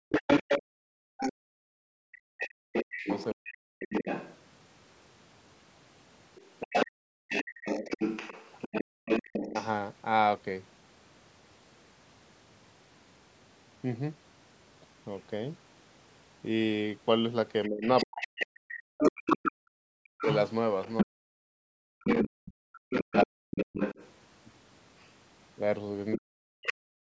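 From 0.00 to 2.20 s the room tone dips sharply, by about 38 dB at its deepest and for roughly a second and a half in all. This is background gated by the echo canceller, which clamped the microphone while its loudspeaker played.

From 0.09 to 9.69 s a second voice sits underneath, only a few dB below the talker. It is likely the other side's voice leaking through, a residue the echo cancellation failed to remove.

Between 2.48 and 3.71 s the speech itself sinks in pieces, by around 40 dB at worst. This is speech suppressed in double talk, likely because both sides spoke at once.

The background gating returns from 6.86 to 9.05 s, about 39 dB deep, and a short dip of roughly 15 dB catches the speech from 9.50 to 9.56 s.

From 17.64 to 26.73 s the second voice returns at the same level. From 17.68 to 26.70 s the talker repeatedly fades or cuts out, down by up to about 40 dB, for around five seconds in total.

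A last gate of about 39 dB drops the background from 26.98 to 27.10 s.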